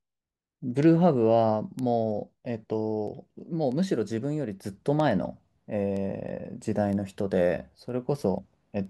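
From 0.19 s to 8.85 s the speech carries word clock ticks, sharp clicks of uneven strength repeating about every 0.3 s, roughly thirty in all. The receiver runs unlocked from the sender, drifting by around 70 ppm, so each clock slip drops or repeats one sample.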